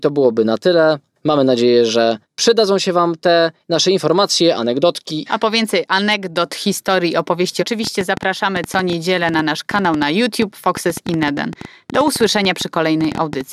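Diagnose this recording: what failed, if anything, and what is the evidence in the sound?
A train of clicks runs from 7.84 to 13.42 s: about fifty pops at an uneven 8.8 per second, about 5 dB above speech, likely analogue-wiring interference.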